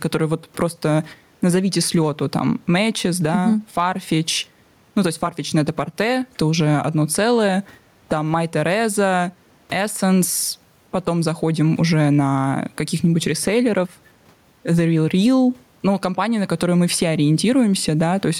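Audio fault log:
Throughout, gain pumping: the gain swings around 10 dB, pulled down under loud speech, likely from excess input gain and a fast limiter.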